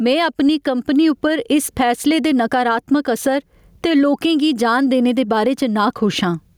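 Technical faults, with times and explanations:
throughout, gain pumping: gain likely set far too high, so a fast limiter clamps loud peaks; the gain swings by about 15 dB, pulling loud and soft parts closer in level.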